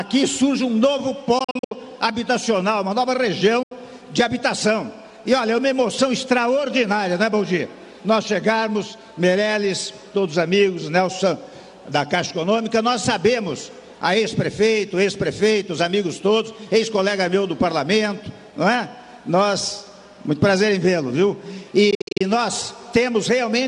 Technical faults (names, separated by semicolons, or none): Bluetooth dropout